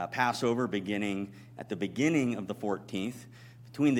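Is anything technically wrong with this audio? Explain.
No, nothing technically wrong is audible here.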